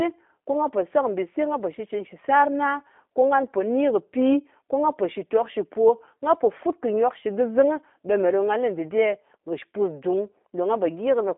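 From start to finish the speech carries G.729 codec damage, plainly audible: the voice is rebuilt from a vocal tract filter, a pitch predictor and a few pulses per frame, which gives a rough, slightly synthetic buzz and fits an 8 kbit/s G.729A stream. The band runs from about 250 Hz to 3.5 kHz, with nothing above 3.6 kHz. Plain telephone band-limiting would sound merely muffled, not grainy and resynthesised like this.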